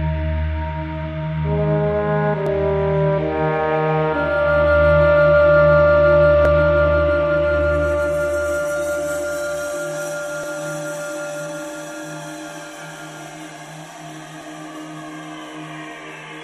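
Around 2.47 to 2.51 s there's a tiny skip where the sound jumps forward, and it happens again at 6.45 to 6.49 s, 10.44 to 10.47 s and 14.41 to 14.46 s. That's overlap between stream segments. The segment timestamps overlap, so the player trims 32 to 43 ms of audio that was never actually doubled, and the waveform lurches across the gap. The 4 s spacing lines up with the segment boundaries, which is why it recurs so regularly.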